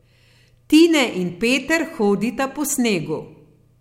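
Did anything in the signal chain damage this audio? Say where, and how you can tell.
No, nothing damaged this speech.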